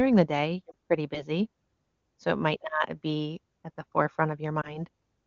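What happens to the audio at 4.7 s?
A lost AMR speech frame hits between 4.61 and 4.79 s. The frame failed its checksum after radio errors, so the decoder reused the previous pitch and vocal tract settings at reduced gain, giving a brief dip or warble that fits about 20 ms of missing speech.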